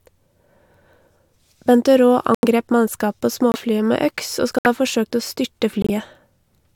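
It's a speech clip with corrupt frame muted dropouts: four abrupt holes of silence at 2.35–2.45 s, 3.52–3.56 s, 4.58–4.66 s and 5.82–5.90 s, each lasting roughly 40 to 100 ms. Each gap sounds like a few compressed frames got bit-flipped, the decoder rejected them, and the player dropped in silence rather than stretching or concealing anything. The surrounding audio stays in time.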